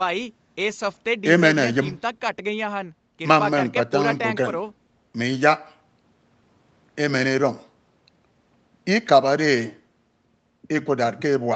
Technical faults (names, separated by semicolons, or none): none